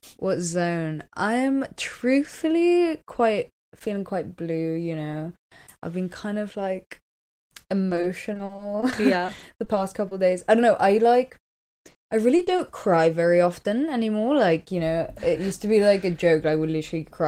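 From 7.89 to 10.13 s, then 11.91 to 12.61 s, there's repeated packet loss: short gaps up to 40 ms, patched by stretching the last sound, so the speech goes choppy and robotic.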